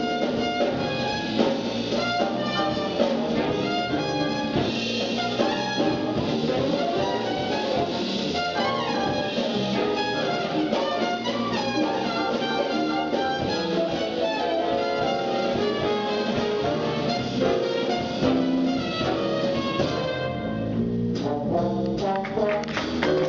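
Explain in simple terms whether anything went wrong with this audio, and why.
Nothing went wrong with this audio; there is no fault to explain.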